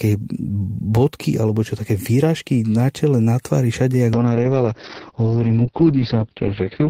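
From 4.14 s, right after "na tvári všade jak", a call bitrate drop makes the speech coarse and muffled to the end, with content above 6 kHz cut. This points to roughly 32 kbps falling to 7 kbps.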